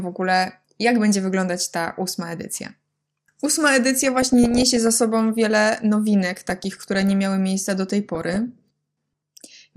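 MP2 compression is the likely cause of the dull, granular character that runs through the whole speech clip. The upper range sounds thin and unsteady, with a gurgling roughness on the voice, as if high sub-bands are being switched off when bits run short and the remaining bands are quantised coarsely. The damage is plainly audible and fits a low rate of around 80 kbps.

DAB burbling breaks in three times. From 3.98 to 4.92 s, just before "sobą wiele", bubbling squelches and chirps rise over the speech. From 6.40 to 7.11 s, ending just before "miały miejsca do tej", the same muddy bubbling returns. A brief burst at 8.15 to 8.36 s follows "miały miejsca do tej". Bit errors, at a rate of around half a percent or less, are slipping through error correction and corrupting samples and scale factors, so individual sub-bands jump in level frame by frame.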